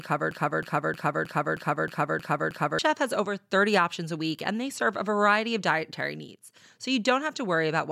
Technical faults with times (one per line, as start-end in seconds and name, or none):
0.00-2.79 broken-record loop